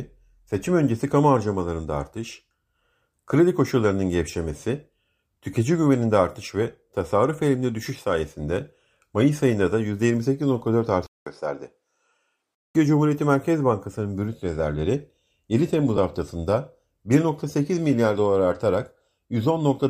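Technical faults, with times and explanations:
11.07 to 12.75 s, input switched to a poorer device: after a 200 ms silence the sound turns duller and slightly quieter, about 5 dB down, with nothing above 11.2 kHz and a faint new noise floor far below the signal. The likely cause is a switch to a narrower-band input with its own tone and noise.
15.97 s, lost LE Audio frames: a 10 ms gap briefly becomes a noisy smear, which fits a single lost frame. The LC3 codec, which likely also applies light compression throughout, fills the gap by reusing the previous spectrum with random signs, so tonal detail turns to noise.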